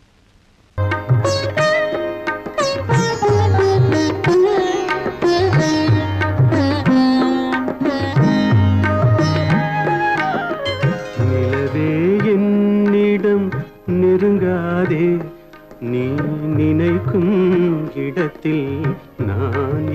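Nothing in the audio points to any technical fault at any moment.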